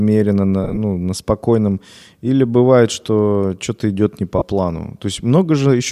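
Speech with lost LE Audio frames at 0.64 to 0.78 s, about 68 ms missing in runs of up to roughly 20 ms, and at 4.38 to 4.42 s, a 30 ms gap. Each appears on a spectrogram as a grainy, smeared patch lacking harmonic lines.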